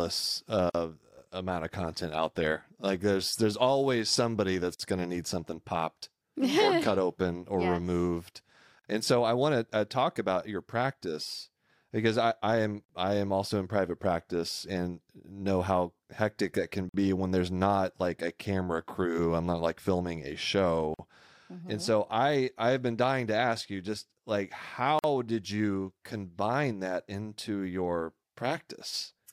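Speech with a gap at a join of encoded pieces roughly every 4.0 s, at 0.70, 4.75, 8.79, 12.84, 16.89, 20.94 and 24.99 s. Each is a 46 to 49 ms silence where separately encoded segments were butted together untrimmed. It shows as a flat waveform notch and a blank vertical stripe with smeared edges.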